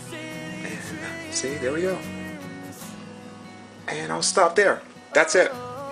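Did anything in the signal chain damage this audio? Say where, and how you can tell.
No, nothing in the signal chain has damaged this audio. No stage from capture through to playback leaves an audible mark on the sound.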